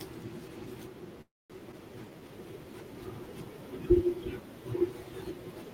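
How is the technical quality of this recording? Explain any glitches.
The speech has three delivery glitches in quick succession, all in the first two and a half seconds.

From 1.21 to 1.52 s there is a call audio freeze, likely from packets held up in transit while the jitter buffer ran dry. The last sound carries on as a fading buzz or hiss, then roughly 220 ms of silence. A waveform shows a decaying tail followed by a flat line. Speech resumes intact, 283 ms later than it should.

At 1.72 to 1.75 s playback skips ahead. Somewhere around 70 ms of audio was discarded, and the two sides are spliced with only a 9 ms bridge. A spectrogram shows an abrupt vertical seam where harmonics and formants jump without transition.

Between 2.05 and 2.53 s a jitter buffer slow-down stretches the speech to 86% speed by repeating pitch periods, adding 76 ms. Pitch stays put, but sounds are drawn out. 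A spectrogram shows elongated, evenly spaced harmonic bands.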